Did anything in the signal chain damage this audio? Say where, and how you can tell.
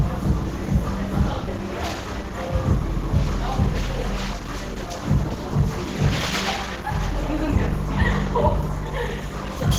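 Yes. Opus compression at the codec stage is the likely cause, and it affects the whole clip. The sound is hoarse, yet still reaches about 20.2 kHz, which fits hybrid mode near 16 kbps. Noise fills weak bands, so it swirls less than MP3.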